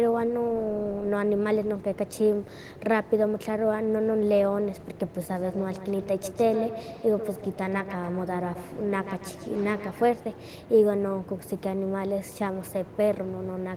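From about 5.2 to 10.1 s there's feedback echo between two devices: a second device in the room replays the call, this mic catches it again, and each bit of speech comes back roughly every 150 ms, thin and ringing, peaking about 11 dB under the voice.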